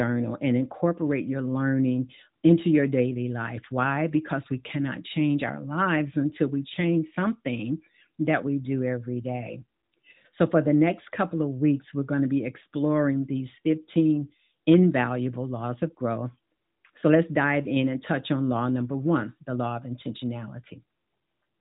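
No technical faults can be heard in this speech clip.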